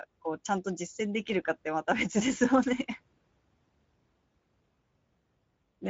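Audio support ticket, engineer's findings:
Speech hoarse and grainy throughout. Speex codec damage, plainly audible. Too few bits for the CELP excitation, which fits a mid-rate setting near 17 kbps.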